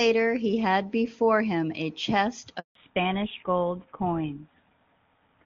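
A handover gap runs from 2.59 to 2.75 s: speech cuts out for 160 ms because no frames arrived while the call switched networks. A fallback to narrowband follows at 2.75 s and lasts to the end. The clear HD Voice sound, consistent with AMR-WB at its top rate, turns duller and rougher, with nothing above 4 kHz, which points to an older codec such as GSM full rate.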